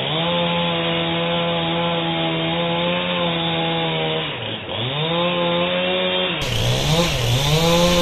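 Everyday sounds. From 0.0 to 6.42 s the audio is dull, with nothing above 3.8 kHz, about 5 dB quieter, and carries its own noise floor. It opens up without a gap at 6.42 s. The cause is likely an input switched to a poorer device.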